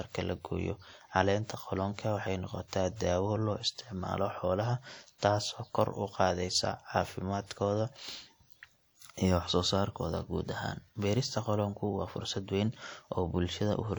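Throughout the speech, the sound rings and washes, with a hiss that swells and fades with the signal, most likely WMA compression at a rate near 48 kbps. Each long transform block spreads quantisation noise over tens of milliseconds, and content stops at 20.1 kHz.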